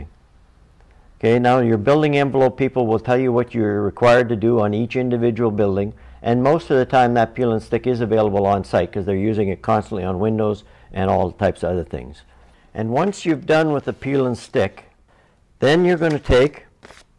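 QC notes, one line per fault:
No fault found.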